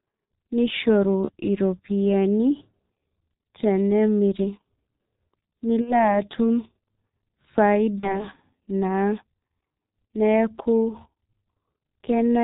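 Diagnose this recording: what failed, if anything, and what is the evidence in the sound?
The codec stage failed: the speech carries G.723.1 coding damage throughout. It is muffled and hoarse, with smeared consonants, which fits the 6.3 kbit/s mode. A spectrogram shows nothing above 4 kHz and blocky harmonics that change only every 30 ms frame.

Packets were lost on the network and concealed by the speech codec at 1.25–1.31 s, 5.81–5.94 s and 8.01–8.25 s. The decoder repeated its last pitch and filter at falling gain. The sound becomes a fading buzz, and it stays weak while the decoder recovers. On a waveform, each gap shows a flat, periodic stretch with a decaying envelope. The gaps fit one, two and one lost 30 ms frames respectively.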